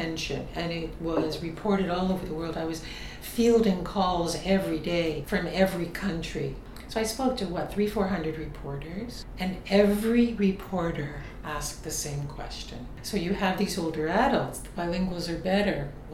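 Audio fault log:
Nothing stood out on listening, and no fault could be heard anywhere in the audio.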